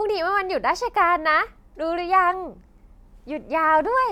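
No technical faults turn up anywhere in this speech recording. Nothing along its length calls for a fix.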